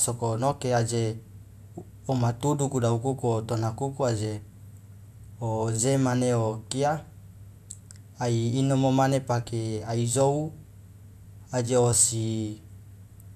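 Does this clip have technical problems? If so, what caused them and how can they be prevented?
No, there are no technical problems in this recording.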